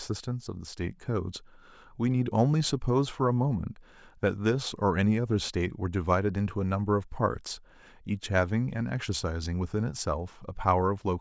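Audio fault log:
No technical faults are audible anywhere in the speech signal.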